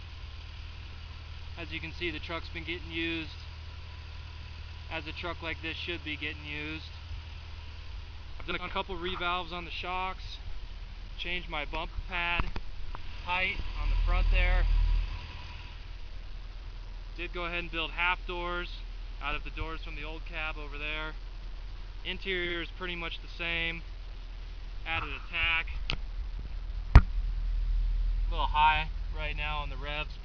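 At 8.51, 13.55, 22.45 and 26.39 s you get frames out of order. Two adjacent runs, roughly 80, 40, 40 and 60 ms long, were swapped and decoded that way, so each short stretch plays with its halves exchanged, a garbled flutter, though no time goes missing.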